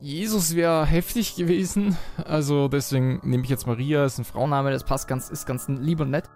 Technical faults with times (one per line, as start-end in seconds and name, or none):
0.00-4.45 section at the wrong speed